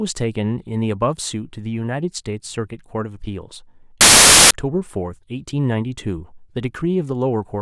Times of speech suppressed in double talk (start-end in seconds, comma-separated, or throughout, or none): none